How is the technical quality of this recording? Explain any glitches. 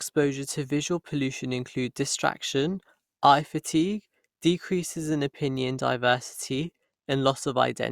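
No glitches or technical faults can be heard here.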